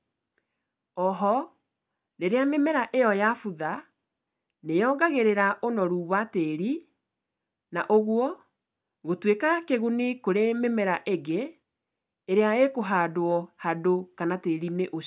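No technical faults occur at any point in the recording.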